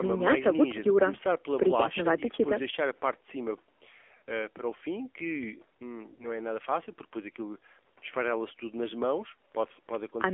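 Throughout, the AMR narrowband mobile codec limits the speech to a 300 to 3400 Hz line band. It sounds plainly buzzy and synthetic, consistent with a low rate near 7.4 kbps. At 4.18 to 4.22 s and again at 6.14 to 6.31 s, lost AMR speech frames cause the decoder to repeat old settings at falling gain. Each gap is heard as the sound being drawn out and fading, with the voice coming back weak or rough for a moment.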